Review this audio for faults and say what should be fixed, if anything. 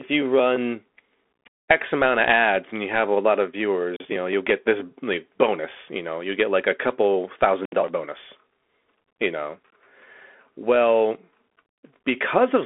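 Throughout, the speech sounds thin and telephone-like, with scratchy s sounds and a granular hiss. This is a Bluetooth CVSD headset codec: audio is limited to roughly 250 Hz–3.5 kHz with nothing above 3.8 kHz, and the coarse one-bit coding distorts sharp sounds, which fits a 64 kbps CVSD stream. Prevent it by recording through a wired or wideband-capable microphone rather than a headset's hands-free profile.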